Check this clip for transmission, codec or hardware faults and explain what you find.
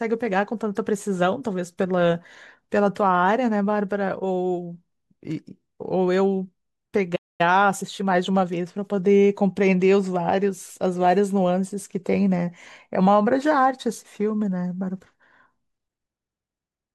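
Two related faults show up around the middle of this speech, and they're a pair: a dropout followed by the player hurrying to make up lost ground.

First, a playback stall from 7.15 to 7.41 s. The speech cuts to silence mid-flow for roughly a quarter of a second, about 236 ms, then resumes. The likely cause is the player running dry of buffered data or its audio thread getting blocked, so nothing reached the output until it recovered.

Right after, from 7.41 to 8.97 s, there's time-compressed catch-up. Having fallen behind, the player trims its backlog by snipping out tiny slices and cross-fading the joins, running at about 1.15 times normal speed. You hear the speech briefly rushed with no rise in pitch.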